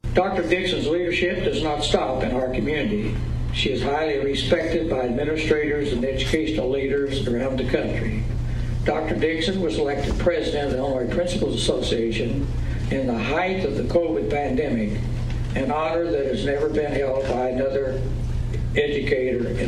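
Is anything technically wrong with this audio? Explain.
Yes. From 0 to 6.0 s the audio is an adaptive stream starting at a low bitrate. The opening is dull, with nothing above about 14.9 kHz, thin or synthetic-sounding treble and heavier codec artefacts, which fits roughly a 20 kbit/s HE-AAC rendition chosen for a fast start. At 6.0 s the player switches to a higher rendition, likely around 96 kbit/s AAC-LC, and the top end opens up. Unlike a rebuffer or dropout, the improvement is sudden but seamless, with no gap.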